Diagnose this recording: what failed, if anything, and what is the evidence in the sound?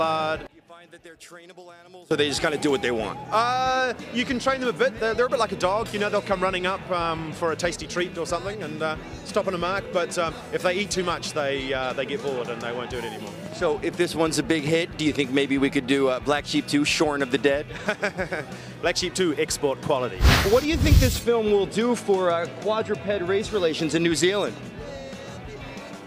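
From 0.47 to 2.11 s the sound collapses to a faint residue, roughly 23 dB down, with the centred content largely gone before full level returns. That pattern points to one channel inverted, likely a polarity reversal in the analogue wiring on one leg of the stereo pair. When the two channels are summed to mono, everything they share cancels and only their difference survives, which is why so little remains during that stretch.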